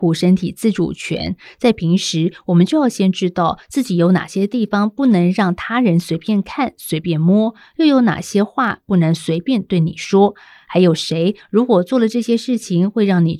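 From 0.12 to 13.39 s, clock slip clicks form a soft rattle, a single-sample slip about every 30 ms, likely from unsynchronised clocks differing by several hundred ppm.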